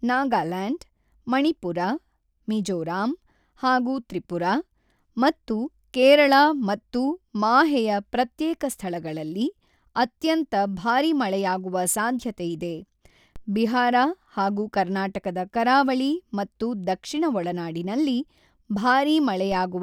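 A low thump sounds under the speech at 13.36 s, just before "ಬಿಹಾರ ಹಾಗೂ ಕರ್ನಾಟಕದ ಕರಾವಳಿ", and again at 19.52 s. Each is a DC step: the waveform's zero line jumps by about −29 dBFS, then the offset drains away through a 5 Hz high-pass.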